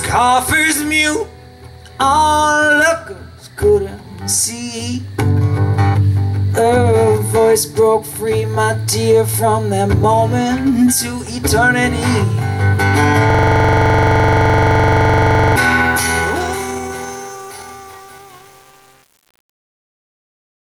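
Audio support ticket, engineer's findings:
System hang loop, 13.30 to 15.56 s: one 42.67 ms fragment repeats about fifty times, a buzz-stutter at 23.4 Hz. Likely a driver or host freeze while the device kept replaying its ring buffer, which fits a 2048-sample buffer. On a spectrogram, identical vertical slices tile at a fixed pitch. The waveform shows one block copied end to end.

Truncation distortion on a fade, 15.82 to 20.75 s, worst from 16.08 s: the fade-out starting around 16 s goes gritty. Likely an undithered gain stage with too few bits, which fits about 7-bit resolution. The waveform collapses into coarse square steps. The spectrogram shows broadband hash.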